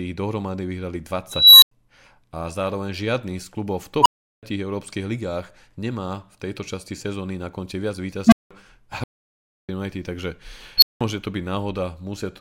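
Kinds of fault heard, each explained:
Unstable filter: a recursive filter with bad coefficients ran away four times, making tones near 4 kHz, 1 kHz and 200 Hz swell, clip, then drop silent.
Audio dropout to silence: the input was likely lost while silence was written, leaving 0.65 s of dead silence with no room tone from 9.04 s.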